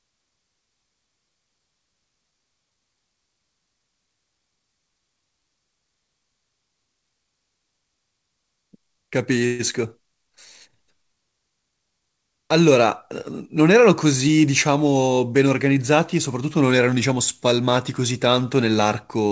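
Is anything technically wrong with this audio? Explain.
Yes. At 9.46 s the speech breaks into a call audio freeze lasting about 0.15 s, until 9.61 s. Incoming packets were likely held up in transit, letting the jitter buffer run dry, so the receiver stretched the last sound into a short fading buzz or hiss to cover about 131 ms. Nothing is lost: the speech picks up exactly where it stopped, just later. The G.722 path leaves nothing above 8 kHz throughout.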